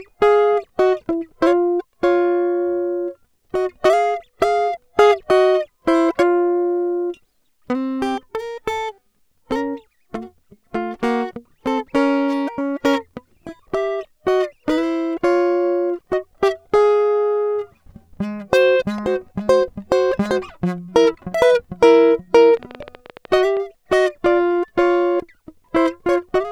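From 22.57 to 23.58 s a train of clicks ticks over the music, around fifteen similar pulses at about 12 per second, unevenly spaced and peaking a few decibels above it. On a spectrogram: thin full-height vertical lines. In the waveform: sharp spikes. Likely from interference or a faulty connection or power supply.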